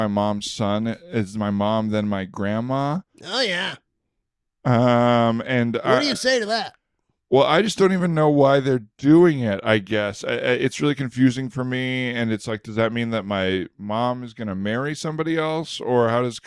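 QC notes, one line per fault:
No technical fault is audible in the speech recording, and the signal holds steady across the whole clip with no dropouts, glitches or level disturbances.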